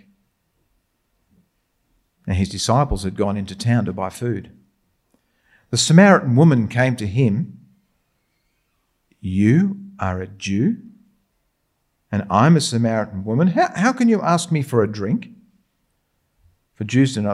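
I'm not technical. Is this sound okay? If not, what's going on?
Yes, nothing here points to a technical fault, so there's nothing to fix.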